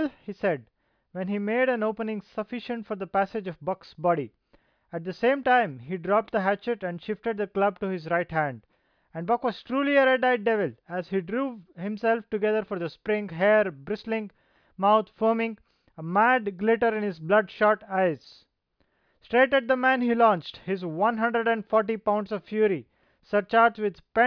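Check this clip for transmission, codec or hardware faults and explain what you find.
No transmission, codec or hardware faults.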